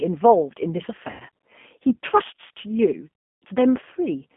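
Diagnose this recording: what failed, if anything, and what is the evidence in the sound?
The codec stage shows the first fault. G.729 coding runs through the whole clip, which points to the 8 kbit/s G.729A variant. The speech sounds rough and slightly synthetic. The band runs from about 200 Hz to 3.4 kHz, so nothing brighter survives.

The network stage failed next: VoIP packet loss concealed by the speech codec. Dropouts at 1.1 to 1.25 s and 3.15 to 3.44 s replace about 90 ms and 270 ms of audio. The decoder stretches its last sound into a buzzy tone or coloured noise that fades.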